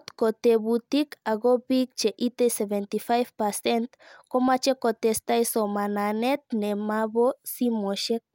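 No technical faults can be heard anywhere in the speech. Nothing in the audio calls for a time mark or an explanation.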